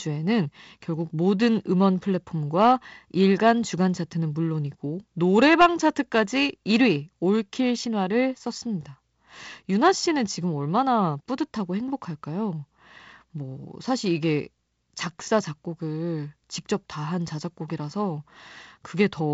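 No faults are audible anywhere in the speech.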